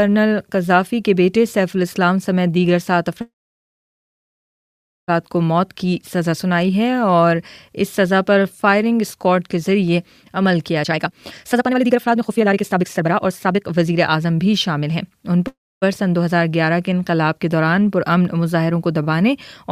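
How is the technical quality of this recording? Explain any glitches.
The recording has two kinds of network-related glitches: two call audio freezes and one stretch of jitter buffer speed-up.

The first call audio freeze runs from 3.21 to 5.10 s, and a shorter one from 15.47 to 15.84 s. In each, the last bit of sound smears into a brief buzzy tail and then drops to near silence, about 1.8 s of it in the first and about 0.27 s in the second. The likely cause is packets getting held up in transit, so the jitter buffer ran dry and the receiver had nothing to play but a decaying continuation. When the packets arrive, the audio resumes exactly where it stopped, so nothing is lost. Instead, a gap is inserted, adding about 1.9 s and then about 0.34 s of delay.

Between 10.83 and 15.11 s there's a jitter buffer speed-up. The sound plays at about 143% speed with the pitch unchanged, so it comes across as rushed rather than chipmunky. 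This happens because the buffer was holding more audio than it wanted. To pull latency back down, the receiver snipped out many tiny pitch-period-sized slices in quick succession, roughly two seconds' worth in total.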